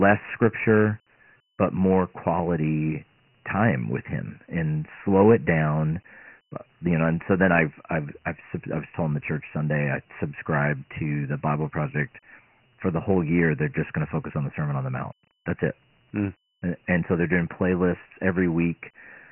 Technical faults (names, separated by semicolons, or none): Dialogic VOX ADPCM